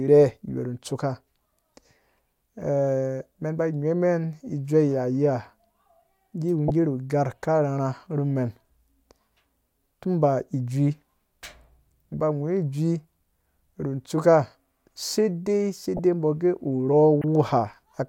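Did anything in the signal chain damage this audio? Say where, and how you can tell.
Yes. The damage is at the codec stage: a corrupt frame was decoded. Three short bursts cut across the speech, at 6.68 to 6.70 s, 15.97 to 15.99 s and 17.21 to 17.24 s. Each lasts about 25 ms. The last is loudest, peaking near -5 dBFS, against about -10 and -20 dBFS for the others. Flipped bits in the compressed stream gave the decoder wrong gains and codes, so it placed energy at the wrong frequencies across about 3 to 7 frames.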